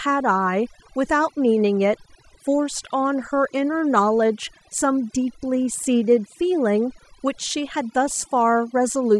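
Overdone noise removal runs throughout. The noise reducer was set too aggressively, cutting individual frequency bands to near zero whenever they approach its noise estimate and taking quiet speech detail with them. The background drops and breaks up into twinkling specks.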